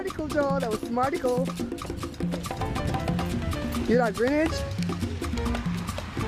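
No technical faults can be heard anywhere in this audio.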